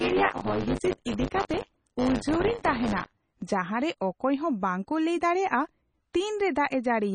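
From the start to about 3.43 s there's buffer tearing: a robotic buzz at 100 Hz riding on the speech. The app writing the ring buffer and the hardware reading it have drifted out of step, so they cross inside every period. Each 10 ms block ends up with a small slice, something like a sixth, of audio from about 30 ms earlier, with hard joins on both sides. That splice repeating 100 times a second is the rattle you hear.

Across the whole clip there's heavy damage that's likely from MP3 compression. Nothing comes through above 9.3 kHz, which fits an encoder's fixed treble cut-off, and the overall damage points to a low bitrate of around 24 kbps. Starved of bits, the encoder drops weak frequency lines, and they flicker on and off from frame to frame. That gives the speech its watery, swirly texture, with metallic chirps on s sounds and smeared attacks.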